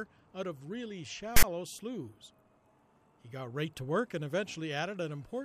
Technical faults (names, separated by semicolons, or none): file tags played as audio